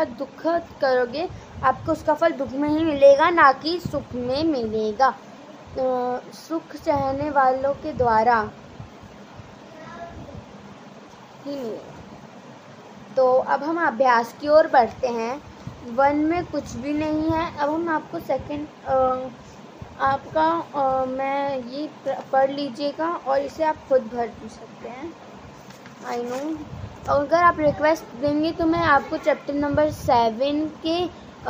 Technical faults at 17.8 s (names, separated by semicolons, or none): none